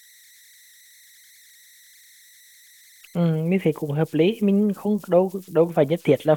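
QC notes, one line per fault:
throughout, converter idle tones: a faint whistle near 2 kHz sits in the pauses, with grainy noise under the quiet parts of the speech, about 31 dB below the signal. An undithered delta-sigma converter settles into repeating bit patterns at low input. These form the tone.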